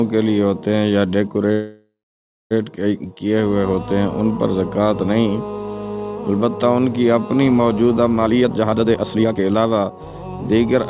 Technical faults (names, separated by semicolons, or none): call audio freeze; jitter buffer speed-up